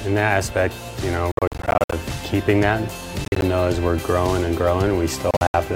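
Three bursts of Bluetooth dropout break the sound: from 1.32 to 1.93 s (about 319 ms missing, longest gap 58 ms), 3.25 to 3.42 s (87 ms lost, longest 44 ms) and 5.31 to 5.54 s (145 ms lost, longest 73 ms). Each is a stutter of short silences with abrupt or briefly faded edges, likely from packets arriving too late for the headphones. The sound resumes further along, as if it kept playing. On a waveform and spectrogram these show as sharp-walled blank slices.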